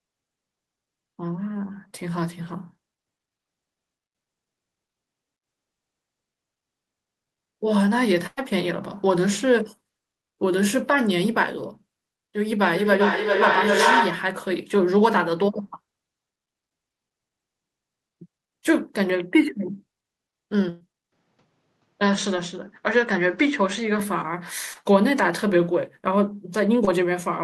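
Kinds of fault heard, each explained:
Short concealed packet loss: about 20 ms of audio arrived too late at 1.87 s and 26.85 s, so the receiver extended the preceding sound, leaving a brief smear.
Burst of packet loss: around 100 ms at 8.26 s and 120 ms at 20.69 s went missing; the last sound was held and faded, then audio resumed further on.
Feedback echo between two devices: from 12.7 to 14.4 s a second device replays the sound into a microphone, returning it roughly every 0.4 s, piling up to about 2 dB above the speech.
Input switched to a poorer device: likely cause of the change from 21.1 to 24.0 s, where the sound goes duller with faint new background noise, without a gap.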